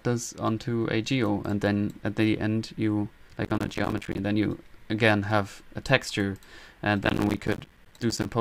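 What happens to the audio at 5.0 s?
Nothing goes wrong at 5.0 s; the audio plays through that moment intact, with no dropout, click or distortion.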